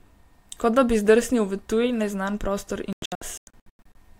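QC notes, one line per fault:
2.93–3.96 s, digital broadcast dropout: the speech breaks into a cluster of short silent holes totalling 576 ms, spread across about 1 s with the longest 96 ms. The receiver muted whenever the signal was lost or frames arrived corrupt, so that audio is simply gone.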